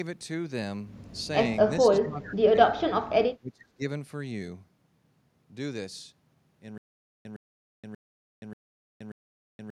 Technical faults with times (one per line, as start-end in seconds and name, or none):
1.80-2.58 speech suppressed in double talk
3.39-3.83 speech suppressed in double talk
6.78-9.78 stutter with silent gaps